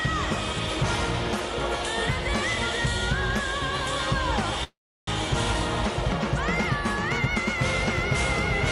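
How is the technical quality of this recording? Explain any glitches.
One glitch stands out, a call audio freeze from 4.64 to 5.10 s. The sound stalls into a brief fading buzz, then about 340 ms of silence. Delayed packets likely emptied the jitter buffer, so audio resumes where it stopped with nothing lost, just a 436 ms gap. On a spectrogram, a smeared tail becomes a blank band; the waveform flattens.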